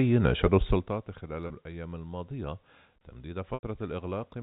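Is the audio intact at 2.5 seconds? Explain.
Yes, at 2.5 seconds the speech is intact, with no dropout, click or other fault at that moment.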